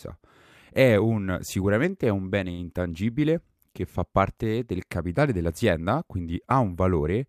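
At 2.51 s, right after "sicuramente è un bene", there is a short stall from a late packet lasting until about 2.60 s. The packet failed to arrive on time, the jitter buffer ran dry, and the receiver sustained the last sound for roughly 69 ms until the data caught up. Nothing is dropped; playback resumes exactly where it paused, now 69 ms later. Audibly, the final sound is held unnaturally long, with a faint buzz or dip.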